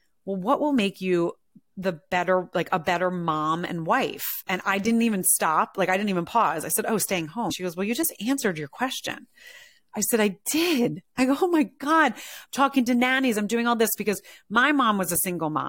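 A speech clip with damaged data in a compressed stream from 7.50 to 7.52 s, between "i said oh staying" and "she goes well you". Corrupted bytes make the decoder misread frames and hunt for the next header, producing a brief glitch.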